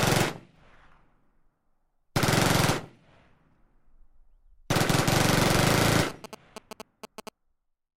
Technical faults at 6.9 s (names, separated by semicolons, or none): GSM signalling bursts